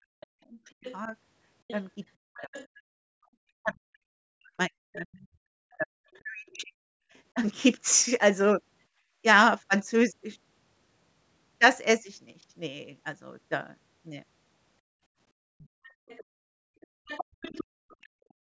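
A speech recording from a call, band-limited by the call's microphone processing so nothing appears above 8 kHz. The talker's voice shows speech suppressed in double talk at 0 to 1.14 s, 2.3 to 7.36 s (the longest, about three seconds affected), 15.57 to 15.68 s and 18.02 s to the end, dipping by up to roughly 40 dB. This is likely an echo canceller turning down both voices when both sides spoke at once; the waveform shows the envelope collapsing in chunks and the spectrogram shows harmonics fading or breaking off. The other side's voice is leaking through at 0.2 to 2.67 s, 5.19 to 7.19 s and 15.84 to 17.96 s, sitting roughly 20, 30 and 15 dB below the talker, likely residual loudspeaker echo the canceller failed to remove, visible as a faint second harmonic pattern under the main one. From 8.94 to 9.1 s the background is gated by the echo canceller, with the room sound dropping about 19 dB for a moment, seen as a brief notch in the noise floor across the spectrogram before it recovers.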